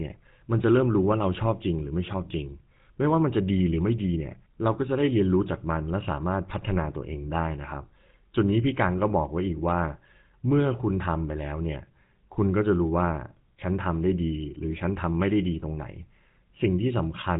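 The clip is speech carrying GSM full-rate codec damage from start to finish. The codec damage is plainly audible. The speech has a buzzy, gravelly roughness. Nothing above 3.8 kHz survives, so the sound is dull and narrow. The codec models the vocal tract and drives it with evenly spaced pulses. It keeps only every third excitation sample. That coarse excitation causes the buzz. The sound fits the 13 kbps full-rate coder.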